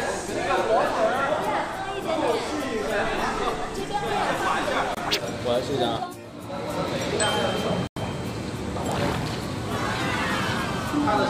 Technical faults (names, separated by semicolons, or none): block of digital silence